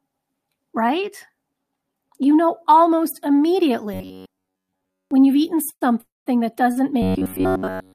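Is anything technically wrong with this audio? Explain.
Yes, there's a fair bit going on, all from about the midpoint on.

Robotic sound from repeated short buffers shows up at 3.94 to 5.11 s, just before "you've eaten", and again at 7.02 to 7.94 s. It's a metallic buzz around 94 Hz, most likely from the player looping roughly 10.7 ms chunks. Most of the first stretch is repeated, and essentially all of the second.

There are two call audio freezes after "you've eaten", at 5.69 to 5.83 s and 6.01 to 6.28 s, likely from delayed packets draining the jitter buffer. Each one holds a fading tail that drops to silence for about 50 ms and 190 ms, then resumes with nothing lost.

A short stall from a late packet at 6.72 to 6.78 s stretches the sound by 37 ms, then carries on from the same spot.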